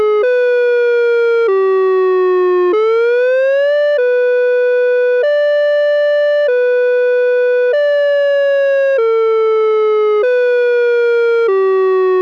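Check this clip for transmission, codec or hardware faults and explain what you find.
Checking the clip turns up no faults to explain.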